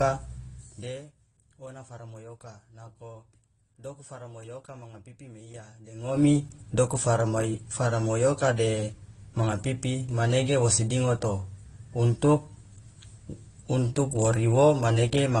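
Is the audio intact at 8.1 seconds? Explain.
No, not really. At 8.1 seconds the speech carries the same damage it has for the whole clip: nothing above 12 kHz, plus two different kinds of coding artefacts heard together. That mix points to transcoding between lossy codecs, likely something like AAC at a low bitrate re-encoded to Opus at a similar rate. The second encoder wastes bits reproducing the first one's artefacts, so both sets stack up.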